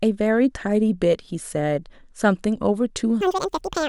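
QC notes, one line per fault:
3.21–3.89 s, audio read two samples at a time (double speed): the reader treats each pair of samples as one frame, so the speech runs at 2x speed and jumps 12 semitones, a full octave, higher to the end.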